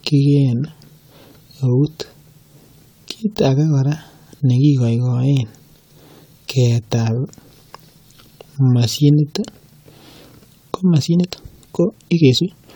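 A speech recording, likely re-encoded around seven times through a lossy codec that fits AAC at roughly 96 kbit/s, shows generation loss throughout: accumulated quantisation leaves it swirly, hollow and smeared, with blurred attacks. From 10.86 s to the end at 12.76 s, a time-stretched section, likely made by software dropping short pieces, speeds delivery about 1.57 times while pitch holds, so the pace jumps and sounds rushed.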